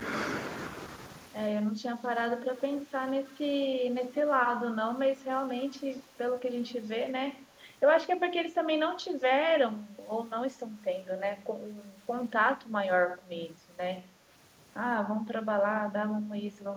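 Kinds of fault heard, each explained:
Speech suppressed in double talk: between 1.75 and 3.85 s, and again from 7.5 to 16.63 s, the speech briefly dips in level while another talker seems to be active. This is likely an echo canceller that cannot tell local speech from loudspeaker echo and turns everything down. The first stretch dips by about 10 dB over a small fraction of a second in total; the later, longer stretch dips more gently, about 5 dB, adding up to roughly half a second.
Echo leak: a faint delayed copy of the speech appears as a short scrap at 2.57 to 2.61 s, about 20 dB below the direct sound, then as a longer trail from 4.15 to 6.88 s, about 25 dB down. Both trail the original by 183 ms. This likely comes from a far end playing the call on a loudspeaker, where residual echo escaped cancellation and was sent back.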